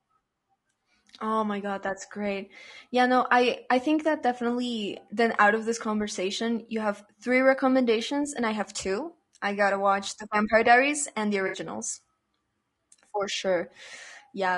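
Throughout the clip the speech sounds rough and grainy, with a noisy haze between the harmonics and a thin, synthetic top end. The likely cause is low-delay AAC compression (AAC-ELD), whose short frames resolve pitch poorly and starve the spectrum at a rate that fits about 32 kbps.

At 11.47 s, just after "and the", the sound smears into a brief noisy, phasey patch lasting until 11.57 s. This is AAC frame loss with concealment: the decoder rebuilt missing frames from the last good spectrum, over a gap that fits three lost frames.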